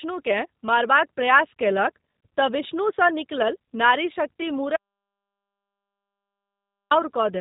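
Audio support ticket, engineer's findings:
G.729 codec damage throughout: speech plainly rough, buzzy and synthetic, nothing above 3.8 kHz. Narrowband low-rate voice coding rebuilding speech from filter, pitch and pulse parameters, which fits an 8 kbit/s G.729A stream.

Audio dropout to silence, 4.76 to 6.91 s: speech cuts out mid-flow, about 2.14 s of silence with no room tone, then resumes abruptly. Likely input path lost (device, link or mute) while encoder kept writing silence.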